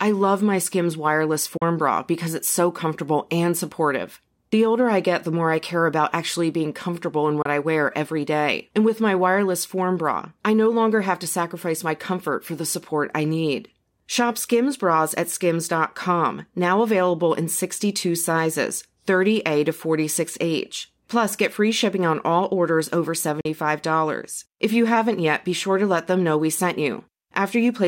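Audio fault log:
1.57–1.62 s, 7.42–7.46 s, 23.41–23.46 s: Bluetooth dropout. Speech drops to silence for 40, 26.7 and 40 ms, then resumes further on, as if it had played through, likely from a few packets reaching the headphones late. Waveform shows flat gaps; spectrogram shows narrow blank vertical stripes.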